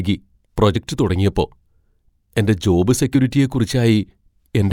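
At 0.75 s the speech is interrupted by a very short burst of damaged data in the compressed stream, lasting only about 16 milliseconds. Part of the encoded stream at that point is corrupt, so the decoder cannot read the affected frame correctly, loses its place in the bitstream and has to resynchronise on the next valid frame header. The result is heard as a brief, sharp chirp or blip that cuts across the sound.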